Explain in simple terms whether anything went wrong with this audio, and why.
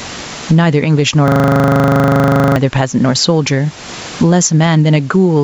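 Two things went wrong. From 1.28 to 2.56 s there is a system hang loop: the computer stalled while the sound hardware kept replaying the same 40 ms scrap of speech about 32 times, a rapid 25-per-second stutter. Roughly a second and a half of speech is lost.

Throughout the clip there is gain pumping. Loud and soft parts end up closer in level, so everything sounds squashed. The likely cause is a microphone level set far too high, with a fast limiter repeatedly pulling it down.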